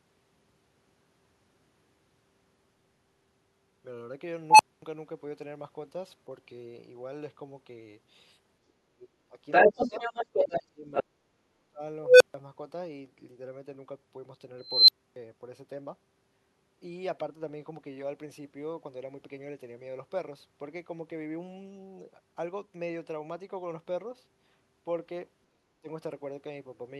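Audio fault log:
8.68–9.38 s, 9.69–9.95 s and 10.34–11.81 s: speech suppressed in double talk. The talker's speech dips sharply, by about 25 to 35 dB at its deepest, and partly cuts out. Both sides were likely talking at once, so the echo canceller turned everything down.
9.51–10.6 s and 10.93–11.03 s: other side's voice leaking through. A second voice comes through the microphone, first as a longer stretch, then as a brief scrap. The echo canceller likely failed to remove all of the loudspeaker playback from the pickup.
25.5–25.89 s: speech suppressed in double talk. The speech drops out again, by about 35 dB at its deepest, for under half a second. This is likely the same cause: the canceller muted the talker while the far side was also speaking.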